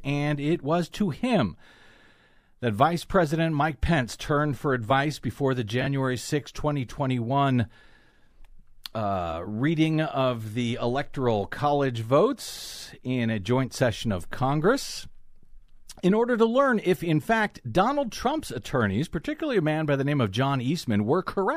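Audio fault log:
5.81–5.87 s, frames out of order: in this speech, one frame of about 23 ms and the next were swapped, so a 54 ms stretch plays with its halves exchanged. The sound jumps forward and then back, giving a brief garbled flutter. Nothing is missing and the timing afterwards is unchanged. That is what separates it from a dropout or a skipped frame, which would leave a gap or a jump ahead in time.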